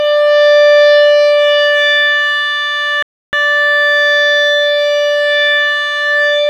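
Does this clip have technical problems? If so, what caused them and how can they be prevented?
Yes. This is a Bluetooth stall: radio interference likely held up packets on the wireless link, so the headphones' buffer ran empty and playback halted until the resent data arrived. In the music, that shows up as a clean cut to silence from 3.03 to 3.33 s, a gap of about 304 ms, before the sound resumes. Keeping the phone close to the headphones with a clear path, and away from crowded 2.4 GHz sources, helps prevent it.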